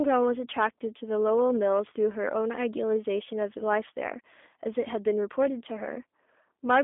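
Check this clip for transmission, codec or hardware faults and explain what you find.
Two faults are audible: a low-rate codec across the whole speech clip and overload at the very start.

G.729 codec, throughout: the speech is rebuilt from a vocal tract filter, pitch predictor and a few pulses per frame, so nothing passes above 3.7 kHz and the band sits near 250 Hz to 3.6 kHz. It sounds plainly rough and synthetic, consistent with 8 kbit/s G.729A.

Hard clipping, 0.00 to 0.67 s: the signal drives about 5 dB past what the stage can pass, so its peaks are sliced flat. Those flat tops add harsh upper harmonics, heard as a gritty, crackling fuzz on the loud opening sounds.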